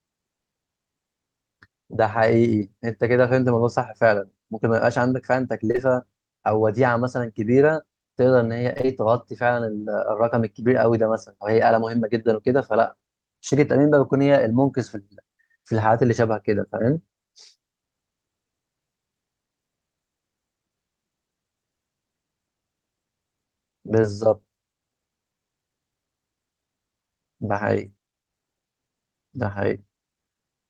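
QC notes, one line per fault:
5.67–5.79 s, short concealed packet loss: three back-to-back 20 ms holes, about 60 ms missing in all. The decoder extends the preceding sound across each hole, so it is heard as a brief smear or wobble.
8.73–8.90 s, repeated packet loss (robotic sound): four separate gaps, 80 ms missing in total, none longer than 25 ms. Patched segments make up about half the stretch, so real and synthesized sound alternate rapidly, giving a choppy texture.
13.50–13.54 s, short concealed packet loss: a single 20 ms hole, bridged by continuing the last sound and blending back. It is heard as a brief smear or wobble. Being isolated, it never builds into the robotic chop of repeated loss.
24.02–24.05 s, short concealed packet loss: another lone 20 ms dropout, filled by extending the preceding sound for a few hundredths of a second. Only a momentary wobble results, with no following gaps to make the texture choppy.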